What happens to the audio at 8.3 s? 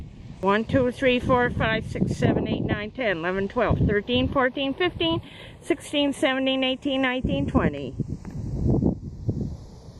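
A slow flanging sweep is audible at 8.3 s. This is channels drifting apart, present throughout. Separate clocks about 20 ppm apart push the inter-channel delay toward a fraction of a millisecond.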